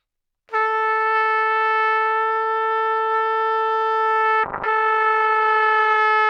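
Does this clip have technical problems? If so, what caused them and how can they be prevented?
Yes. A call bitrate drop from 4.45 to 6.05 s makes the sound coarser and rougher, and the upper cut-off falls from 20 kHz to 12 kHz, pointing to about 12 kbps. Securing steadier network bandwidth and setting a higher minimum encoder bitrate would prevent it.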